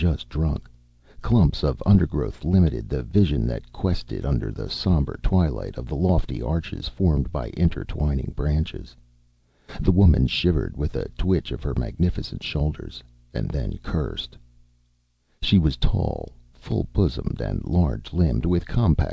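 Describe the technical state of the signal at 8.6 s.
At 8.6 s the signal is intact, with no dropout, glitch or distortion, only the limited bandwidth of the call path, whose content stops at 8 kHz, consistent with a wideband codec such as G.722.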